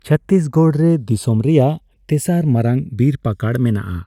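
A speech recording where the channels are drifting apart throughout: the interchannel delay creeps toward roughly 0.7 ms, consistent with two separately clocked devices, so mono sums flange slowly.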